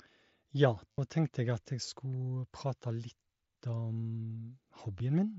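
At 0.91 to 0.98 s, concealed Bluetooth headset packet loss fills a 70 ms gap with a buzzy repeated tone at full level, then a slight warble as real speech resumes. Brief two-frame instances follow at 3.94 s and 4.98 s. Unlike a dropout, nothing goes silent.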